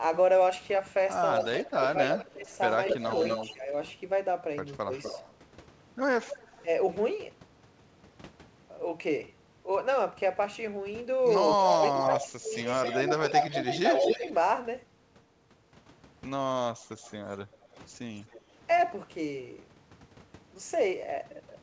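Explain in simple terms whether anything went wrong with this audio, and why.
Three problems can be heard in this speech, all typical of a call where one side uses a loudspeaker.

Echo leak: from 1.42 to 6.64 s, 11.62 to 14.31 s and 17.06 to 18.41 s, a delayed copy of the voice trails the original by about a quarter of a second (240, 254 and 261 ms). It is nearly as loud as the speech in the first stretch, just as loud in the second, and faint in the third. The likely cause is a loudspeaker whose sound reached the far microphone and was not fully cancelled before being sent back.

Speech suppressed in double talk: from 1.6 to 5.11 s and from 11.77 to 14.23 s, the talker's voice dips in pieces, totalling roughly a second in each stretch, with the second stretch dipping much deeper. This likely happened because both sides spoke at once, and the echo canceller turned everything down rather than risk passing echo.

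Background gated by the echo canceller: between 16.76 and 17.68 s, the room sound briefly drops out, for roughly a sixth of a second in total. This happens while loudspeaker sound is arriving, because the canceller clamps the microphone down hard and then releases it.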